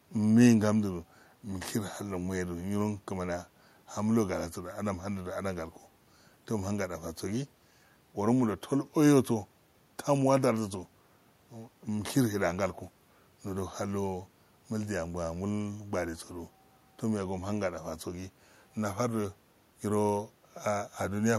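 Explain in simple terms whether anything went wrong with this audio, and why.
Nothing stood out on listening to this speech; the faint background noise of the room sits well beneath the talking and is simply part of where it was recorded.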